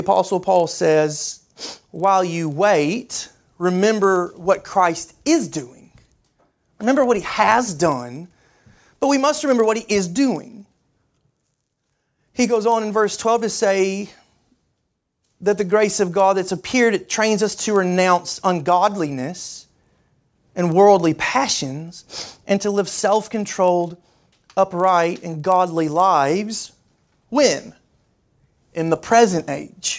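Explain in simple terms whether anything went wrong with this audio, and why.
Something did go wrong, and it runs through the whole clip: the resampler restarted on every block. The speech was converted from 48 kHz down to 16 kHz in 40 ms chunks, each handled on its own, so the converter never saw the neighbouring samples at the chunk edges. Each edge picks up a tiny glitch, and at 25 per second they blur into a rattly buzz that rides along with the speech and drops away in the pauses.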